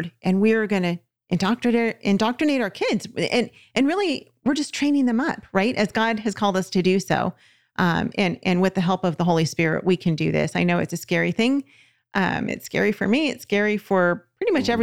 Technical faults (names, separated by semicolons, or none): none